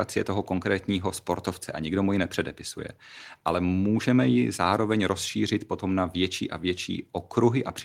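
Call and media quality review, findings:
No findings in the call and media quality review for this speech clip.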